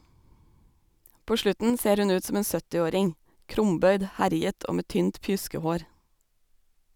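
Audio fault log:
1.7–1.8 s, sudden gain jump: the speech and the background noise drop together by about 5 dB in a single step, with no fade at all. That's likely a digital gain change applied between one sample and the next instead of being ramped smoothly.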